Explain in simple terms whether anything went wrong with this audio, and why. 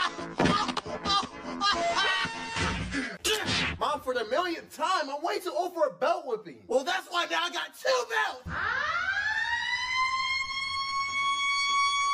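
One channel of the recording arrives roughly ten milliseconds later than the other, and the two are then mixed into a single channel. This is called channel delay, and it causes comb filtering. Because of that small timing gap, parts of the sound cancel each other at a row of evenly spaced pitches, starting around 40 Hz. The result, heard from start to finish, is a hollow, phasey quality.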